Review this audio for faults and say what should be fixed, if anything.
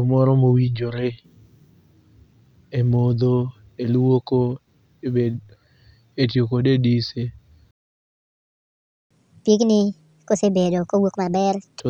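The speech cuts out abruptly at 7.71 s and stays silent until 9.11 s, a gap of about 1.4 s. This is a playback stall, most likely the player running out of buffered data or its output thread being blocked before resuming. A larger playback buffer and keeping the audio thread free of blocking work would prevent it.

From 9.11 s to 11.8 s the speech runs at 1.5 times normal speed, with pitch raised by roughly seven semitones, before settling back. This is catch-up at higher speed: the player resamples its backlog faster to recover the lost time. Catching up with time-stretching that preserves pitch, or simply skipping ahead, would avoid the chipmunk effect.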